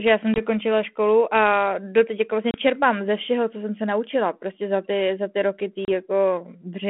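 Packet loss on an ADPCM call cuts hard-edged silent gaps at 0.34 s after "já jsem", 2.51 s after "a doteď jako vlastně", and 5.85 s after "za ty roky ty", lasting 20, 30 and 30 ms. Each shows as a blank vertical stripe in the spectrogram and a flat line in the waveform. Afterwards the decoder's predictor and step size briefly mismatch the sender's, so the sound resumes slightly distorted before settling.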